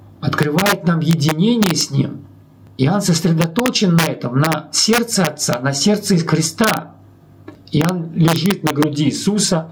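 Gain pumping runs through the whole clip. The gain swings by roughly 15 dB, so the level breathes in step with the material. Loud and quiet passages sit unnaturally close together, and the sound feels squashed. The likely cause is input gain set far too high for the microphone, with a fast limiter or compressor clamping down on each loud moment.

Integer overflow appears on the loudest sounds, from 0.43 to 0.72 s, 1.11 to 1.81 s, 3.42 to 4.07 s, 4.45 to 4.53 s, 4.93 to 5.53 s, 6.64 to 6.77 s, 7.81 to 7.89 s and 8.28 to 8.83 s. In each stretch the signal overshoots the integer ceiling by about 1 to 4 dB, the worst being about 4 dB at 3.42 and 6.64 s. Instead of being held at the limit, those peaks wrap around to the opposite extreme of the range. The result is violent, harsh cracks, far sharper and more abrupt than ordinary clipping.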